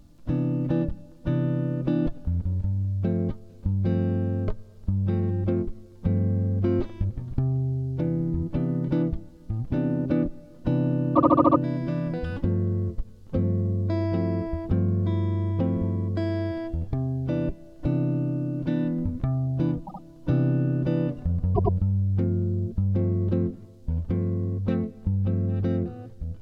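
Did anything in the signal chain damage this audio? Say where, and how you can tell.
Yes. Repeated frames at the codec or storage stage: runs of compressed frames were written more than once, so the decoder plays the same short block again. From 11.15 to 11.58 s a 72 ms block loops six extra times, adding 432 ms. At 19.86 to 20.01 s a 72 ms block repeats twice, and at 21.54 to 21.73 s a 96 ms block repeats twice. Each is heard as a stutter.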